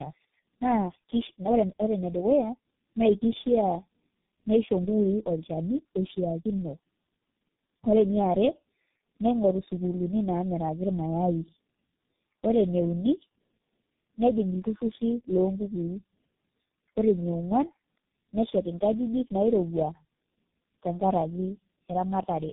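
Tandem speech coding runs throughout the speech, from the start to the end. The sound points to three low-rate speech codecs in a row, likely G.729A, GSM full rate and G.723.1, each decoding the last one's damaged output and re-coding it, with plain G.711 links in between. The errors compound, so the speech sounds rough, muffled and warbly, with nothing above 3.7 kHz.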